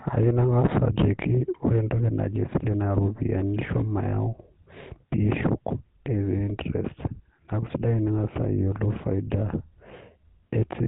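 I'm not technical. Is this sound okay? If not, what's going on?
No. Throughout the speech, the voice sounds buzzy and gravelly, with a coarse, rasping edge, and it lacks the crisp top end you'd expect, so it comes across as boxy and phone-like. That roughness comes from the GSM full-rate codec, the early mobile-phone system. It rebuilds the voice from a simplified model driven by evenly spaced pulses that keep only part of the detail, and it drops everything above 4 kHz.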